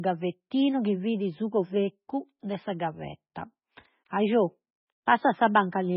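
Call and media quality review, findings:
Watery, swirly speech throughout, nothing above 5.5 kHz; likely MP3 compression at a starved bitrate, around 16 kbps, dropping treble and flickering weak bands frame to frame. Heavy damage.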